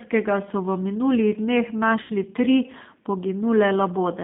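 Throughout, the G.729 codec rebuilds speech from a vocal tract model and sparse pulses. The band sits near 150 Hz to 3.6 kHz, and the sound is plainly rough and synthetic.

From 2.02 to 2.12 s, VoIP packet loss is concealed by the speech codec. About 80 ms went missing, which fits eight lost 10 ms frames. The decoder stretches the last sound into a fading buzzy tone or coloured noise, and it stays weak briefly afterwards.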